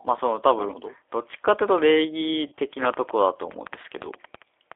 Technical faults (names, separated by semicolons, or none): G.729 codec; VoIP packet loss concealed by the speech codec